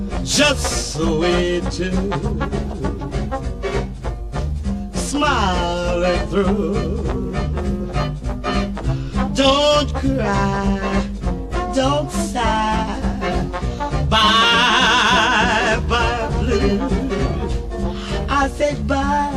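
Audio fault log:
9.07 s, DC step: a single low thump, while the sound carries on unchanged. The waveform's zero line jumps suddenly by about -30 dBFS, as when a converter recalibrates or an offset input is switched in. The abrupt edge makes the thump, and a 5 Hz high-pass then drains the offset back toward zero over a few tens of milliseconds, so no lasting bias remains.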